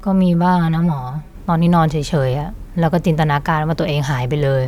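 A speech recording opens with channel delay and comb filtering. From 0.0 to 1.35 s the sound is hollow and phasey. One channel arrives late by about 5 ms, and the two are then summed to mono. Content common to both channels cancels at evenly spaced frequencies. The first notch sits around 100 Hz, with further notches repeating every 200 Hz or so. This fixed comb pattern thins out the sound.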